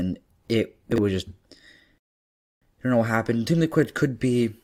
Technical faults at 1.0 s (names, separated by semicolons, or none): chunks out of order